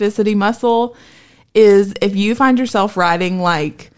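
No technical faults are audible.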